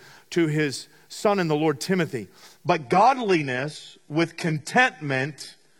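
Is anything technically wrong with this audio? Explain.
Yes. From 2.66 s to the end, the speech drops to a lower-bitrate adaptive stream: the quality suddenly drops and codec artefacts rise, with no gap, which fits a switch to a low-rate HE-AAC version.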